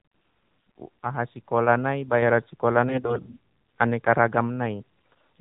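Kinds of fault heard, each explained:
AMR narrowband mobile codec: The speech is muffled and thin, with nothing above 4 kHz, and has a buzzy, synthetic edge throughout. The mobile speech coder samples at 8 kHz and rebuilds the voice from a vocal-tract model driven by a few pulses in each 5 ms. The thinness and buzz are plainly audible, which fits one of the codec's lower rates, around 7.4 kbps.
AMR bit errors: The speech turns hoarse, scratchy and gargly from about 2.89 to 3.37 s, and again briefly from 4.77 to 4.82 s. Pitch and loudness stay roughly in place. Over a weak link, some of the less protected bits in the coded frames were flipped, at a rate of a few percent. The pulses driving the voice model then landed in the wrong places, and the finer pitch, gain and spectral values were thrown off.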